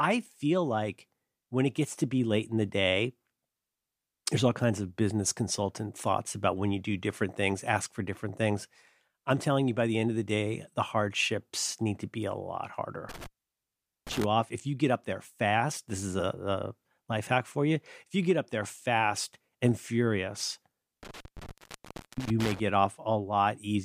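Intermittent contact strikes at 13.09 s, just after "to be a lot", and again at 21.03 s, after "there fast and furious". A loose cable or plug briefly loses its connection, so the speech drops out, with crackle at the edges where the contact scrapes open and shut, and faint hiss remains while the line is open. The first dropout spans 13.09 to 14.24 s, open for about 0.8 s before "off if you get". The second runs to 22.60 s, open for about 0.69 s.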